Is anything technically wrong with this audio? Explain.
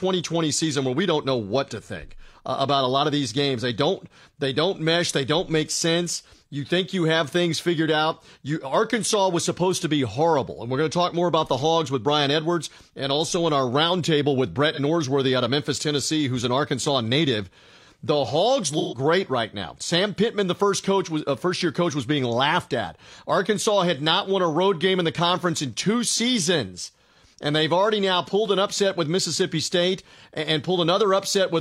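Yes. AAC frame loss with concealment at 14.73–14.79 s and 18.78–18.98 s: lost frames were rebuilt from the last good spectrum, leaving a brief smeared, phasey patch of about 43 ms, then a longer 128 ms one.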